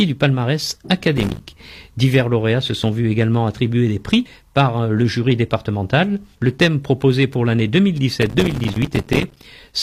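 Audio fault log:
1.17–1.40 s and 8.23–9.45 s, processor overload crackle: missed deadlines on what sound like 5 ms buffers leave about 20 and about 100 hard-edged silent gaps, heard as gritty crackle.
2.84–2.87 s and 8.85 s, overlap between stream segments: segments about 6 s apart overlap and the overlap is cut away, so the waveform jumps in a tiny skip.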